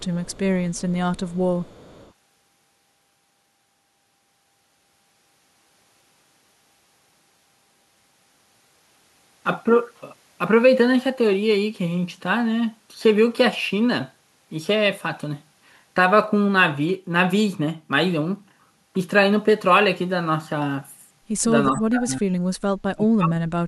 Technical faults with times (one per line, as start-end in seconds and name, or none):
0.00-0.40 echo leak
0.71-2.13 echo leak
21.74-22.31 speech suppressed in double talk
22.94-23.41 speech suppressed in double talk